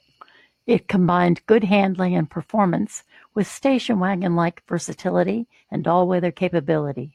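No technical faults can be heard anywhere in the speech. There is no moment that needs a timestamp or an explanation.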